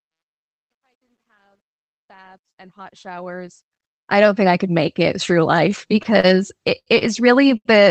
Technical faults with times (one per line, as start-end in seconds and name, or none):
0.00-4.32 truncation distortion on a fade
5.71-6.25 repeated stalls (stutter)
6.78-7.03 short stall from a late packet
7.57-7.67 short stall from a late packet